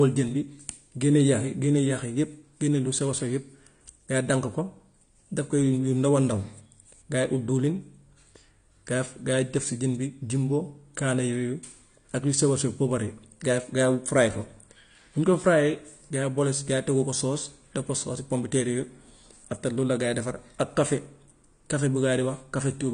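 From start to finish the speech sounds dull and smeared, with nothing above 10 kHz, and the codec damage is plainly audible: sibilants turn fizzy and sustained sounds carry a warble. The likely cause is AAC compression, an AAC-LC encode at a low rate, which fits around 32 kbps. Short of bits, the encoder lowered its cut-off and quantised the remaining frequency lines coarsely, leaving gaps in the spectrum that smear and roughen the detail.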